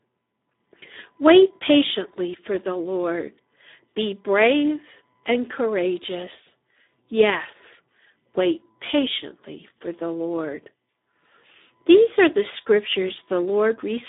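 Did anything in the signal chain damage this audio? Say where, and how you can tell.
Yes: throughout, the speech sounds hoarse and noisy, confined to 250 Hz to 3.7 kHz with nothing above 3.8 kHz. This points to heavy Speex codec starvation, consistent with about 8 kbps.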